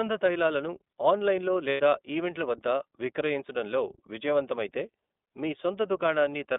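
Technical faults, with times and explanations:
throughout: iLBC codec. The speech sits in a narrow telephone band, roughly 250 Hz to 3.6 kHz, so it sounds thin and lacks both deep body and upper sharpness. The coding damage is plainly audible as a rough, slightly synthetic texture. Each 30 ms frame is coded on its own, with no help from the frame before, and fine detail is lost in the low-rate coding. This grain fits the 13.33 kbps mode.
1.71 to 1.80 s: lost iLBC frames. Just after "తైలాలను ఆన్లైన్లో", about 90 ms of audio drops out, which fits three lost 30 ms frames. The decoder fills the gap by repeating the last pitch cycle with some noise mixed in. That makes a brief held, faintly buzzy vowel instead of real sound. Because iLBC frames stand alone, the voice is right again almost at once with "ఈవెంట్ల వద్ద విక్రయించడంలో విజయవంతమైతే".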